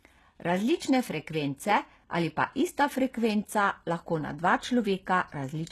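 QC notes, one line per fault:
throughout: HE-AAC compression, likely at a low bitrate near 16 kbps; nothing above 12.3 kHz remains, and replicated treble makes s sounds gritty and metallic.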